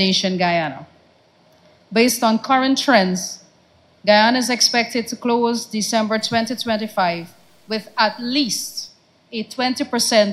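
From 6.18 to 8.88 s the audio turns grainy, with a gritty distortion that tracks the sound and roughens its quieter parts, sitting about 40 dB down. That's classic low bit depth without dither, likely from truncating to around 9 bits with no dither applied.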